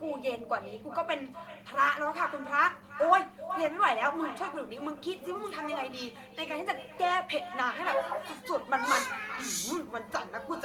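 Throughout the speech, every phrase is trailed around 400 ms later by a fainter, thinner copy about 14 dB down. This is echo with no canceller: the far end plays the call over a loudspeaker, its microphone picks it up, and nothing removes that return.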